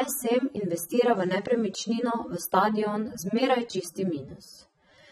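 Speech that sounds dull and smeared throughout, with a warbling, fizzy texture on sustained vowels and sibilants, likely from AAC compression at a low bitrate, roughly 24 kbps. On a spectrogram, the top cuts off sharply with patchy holes below it.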